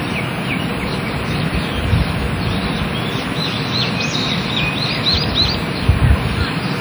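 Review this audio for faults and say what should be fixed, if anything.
Throughout the clip the sound rings and smears, with a washy hiss that swells and fades with the signal and faint detail dropping out. This is likely WMA compression at a low bitrate, around 48 kbps. The transform codec's long blocks spread quantisation noise over tens of milliseconds. Content still reaches about 20.1 kHz, so the damage comes from this smearing rather than a lowpass cut-off. Re-export from the original source at a higher bitrate, or in a lossless format.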